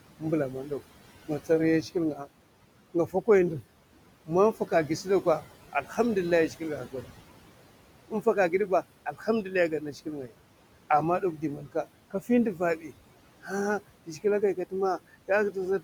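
Noise suppressor artifacts run through the whole clip. The suppressor treats the steady room noise, which sits about 16 dB below the speech, as something to remove and pulls it down by about 18 dB wherever it judges no speech is present. Because that decision is made frame by frame, the background sinks in the gaps and comes back up under the speech.

Speech cut by the noise suppressor occurs seven times: 0.2–0.72 s, 1.28–2.28 s, 2.94–3.63 s, 4.26–7.06 s, 8.1–10.34 s, 11.21–13.51 s and 14.06–14.73 s. In each stretch the suppressor mistakes low-level parts of the speech for noise and turns them down along with the background. The deepest drops range from about 12 dB to about 17 dB. Within each span only short pieces are affected, adding up to a fraction of a second in the early and last spans and more in the longer middle ones. Those pieces sound swallowed or faint against the speech around them.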